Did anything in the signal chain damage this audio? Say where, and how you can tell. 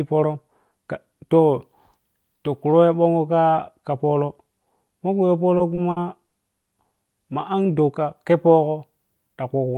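Yes. Repeated stalls (stutter) between 5.57 and 6.68 s: network packets arrived late, draining the jitter buffer five times, and the receiver stretched the last sound to bridge 210 ms, longest gap 80 ms.

Then a jitter buffer slow-down from 7.63 to 8.05 s: the buffer repeated pitch periods to rebuild its reserve, adding 36 ms, so the speech drags at 93% speed with unchanged pitch.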